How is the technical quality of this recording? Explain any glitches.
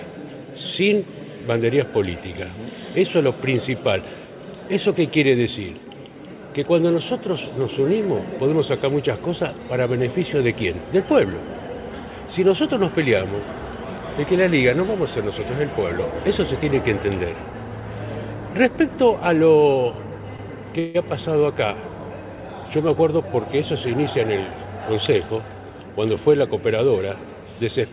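The recording carries three brief glitches close together, between about 20 and 23 seconds. The whole clip sounds band-limited, with nothing above 4 kHz, which fits a G.711 A-law call path at 64 kbps.

From 20.36 to 20.42 s, the sound is held for a moment too long. This is a short stall from a late packet. The jitter buffer ran dry, so the receiver stretched the last sound by about 23 ms and then carried on without losing anything.

From 20.79 to 20.97 s, the audio stalls again, and the last sound continues as a fading buzz or hiss for about 157 ms without dropping to silence. This is a call audio freeze, likely caused by packets held up in transit. Playback resumes where it stopped, so a gap was inserted and nothing is missing.

From 22.88 to 23.24 s, the sound runs hurried, at about 109% speed with unchanged pitch. This is a jitter buffer speed-up. To shed excess buffered delay, the receiver trimmed short pitch-period slices, roughly 40 ms in all.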